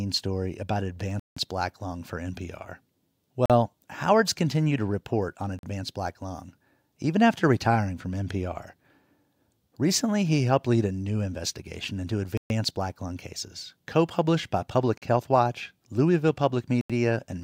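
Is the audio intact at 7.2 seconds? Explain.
Yes, the speech at 7.2 seconds comes through intact, with no dropout, click, distortion or other fault at that moment.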